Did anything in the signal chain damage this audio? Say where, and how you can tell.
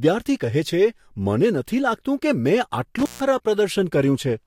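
Yes. The speech is damaged by an intermittent contact in the analogue wiring, between 2.99 and 3.21 s. A loose plug or cable breaks the connection for about 145 ms and then remakes it. The signal cuts out with crackle as the contact opens and again as it closes, and faint hiss fills the gap. A digital dropout or packet loss would instead give a clean edit into true silence, without crackle at either edge.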